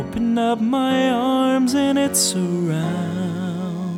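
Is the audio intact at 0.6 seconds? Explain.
Yes, at 0.6 seconds the audio is intact, with nothing audibly wrong at that moment.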